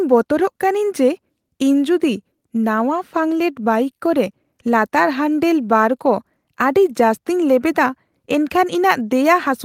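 Nothing in this recording trips any alarm for me, as there's no fault to point to anywhere along the way.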